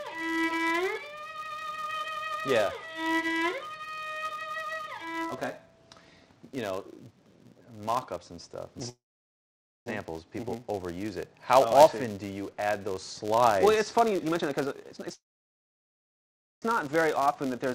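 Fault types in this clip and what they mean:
Filter restarted on every block: a processing filter drops its internal state at each block boundary and starts again from zero, so every block opens with a small transient. Here that produces a steady 200 Hz buzz running through the whole clip, which fits blocks of about 5 ms. The buzz rises and falls with the level of the sound and is most evident in louder passages.
Call audio freeze: the sound stalls, briefly continues as a fading buzz, and then drops to silence before resuming exactly where it stopped. Nothing is lost, but a gap is inserted. The likely cause is delayed packets leaving the receiver's jitter buffer empty. It happens from 8.89 to 9.88 s, with about 0.88 s of silence, and from 15.14 to 16.64 s, with about 1.42 s of silence. The freezes add about 0.97 s and 1.48 s of delay respectively.
Jitter buffer speed-up: the receiver drains excess buffered audio by cutting out short pitch-period-length pieces in quick succession. 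The sound runs faster at an unchanged pitch and comes across as hurried. From 14.05 to 15.11 s it plays at 146% speed, removing roughly half a second. From 16.87 s to the end it plays at 112%, removing roughly a tenth of a second.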